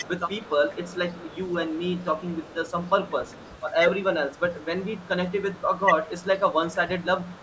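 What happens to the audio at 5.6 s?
A very faint, delayed copy of the speech trails it by about 176 ms from 4.02 to 6.27 s. This is an echo leak, likely from a far-end loudspeaker whose echo canceller let some of the played-back call slip into its microphone and return.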